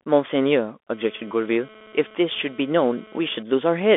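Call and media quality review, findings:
Bluetooth CVSD headset codec, whole clip. Speech confined to roughly 250 Hz to 3.5 kHz, nothing above. Scratchy sibilants, granular hiss underneath. Cause: one-bit delta modulation with adaptive step, which fits a 64 kbps headset link; loud high content outruns the step.

GSM phone buzz, 0.93 to 3.43 s. Hard, raspy buzz at 217 Hz with dense harmonics, about 27 dB below the speech, unrelated to it. Intermittent, pulsing on and off. Cause: nearby 2G handset in data transfer, its burst transmissions rectified by the audio circuit.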